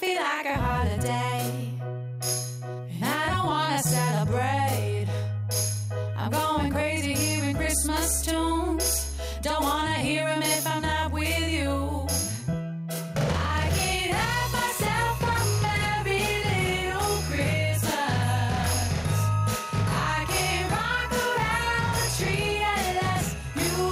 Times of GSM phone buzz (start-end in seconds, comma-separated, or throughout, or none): none